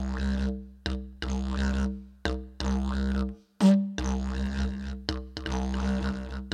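An everyday sound recording with a doubled audio track from 4.47 s to the end: a full-band copy trails about 300 ms behind, roughly 5 dB quieter, starting abruptly, likely from a second, slower capture path. Spectrograms show every event repeated at that fixed offset, and waveforms show echoed transients.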